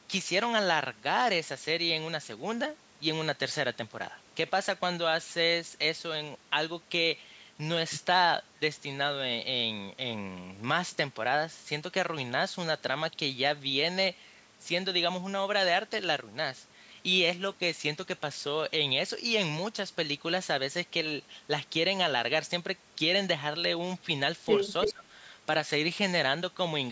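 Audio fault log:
24.82–24.93 s, echo leak: a short, delayed copy of the speech surfaces, trailing the original by about 327 ms and sitting only a little below the direct speech in level. It is brief and fragmentary rather than a sustained repeat. The likely cause is a far-end loudspeaker whose sound reached that side's microphone and was not fully removed by its echo canceller, so the residue returned down the line.
24.87–25.05 s, speech suppressed in double talk: overlapping the echo burst, the speech level dips sharply, by roughly 15 dB at its deepest, in pieces totalling about 150 ms. The drop coincides with both sides sounding at once, which likely left the echo canceller unable to separate the local talker from the returning echo, so it attenuated everything on that path.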